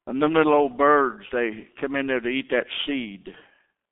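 The G.723.1 codec affects the whole clip. Nothing passes above 3.8 kHz, so the speech sounds muffled and hoarse with smeared consonants, which fits a rate near 6 kbit/s.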